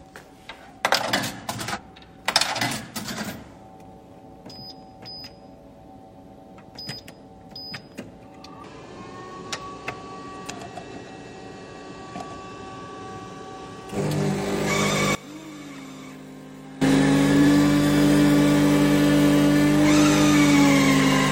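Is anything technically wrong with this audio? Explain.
Yes. There are two separate faults.

Compressed frames are skipped at four points: 1.72 to 1.79 s, 8.60 to 8.65 s, 10.45 to 10.51 s, and 17.37 to 17.46 s. The decoder never plays some whole frames, either because they are missing from the stream or because it discards them as corrupt. The sound jumps forward each time, by around a fifth of a second at most of these points and closer to a third at 8.60 s.

From 15.15 to 16.82 s the sound drops by about 22 dB, which points to one channel inverted. The likely cause is reversed polarity on one stereo channel. When the two channels are combined, everything they share cancels, so centred content and low end largely disappear. Only the faint difference between the channels remains through that stretch.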